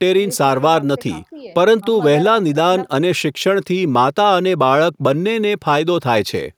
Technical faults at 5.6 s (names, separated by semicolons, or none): none